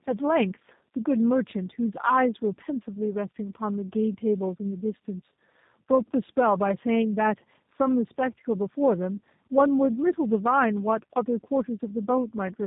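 Tandem speech coding runs from start to end of the clip. The speech passes through a low-rate coder that fits G.729A at 8 kbit/s, is carried as G.711 mu-law at 64 kbit/s, then coded by G.729A again. The second low-rate coder has to model what the first already smeared, so its errors stack. The speech sounds rougher, duller and more warbling than one pass would leave it, and nothing remains above 3.8 kHz.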